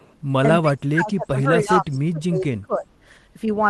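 A speech clip carrying two call-processing faults. The echo canceller on a loudspeaker line likely failed to fully remove its microphone's pickup, so from 0.00 to 0.18 s an echo leak returns: a copy of the speech delayed by about 0.30 s (304 ms), very faint, roughly 35 dB below the talker. Later, both ends were talking at once and the canceller, likely unable to tell local speech from loudspeaker echo, attenuated everything. This is speech suppressed in double talk between 0.62 and 2.87 s: the talker's level sinks by as much as roughly 20 dB, with about a second and a half of the voice dipped or broken into pieces. The call audio itself reaches up to about 12 kHz, consistent with an Opus link running near 20 kbps.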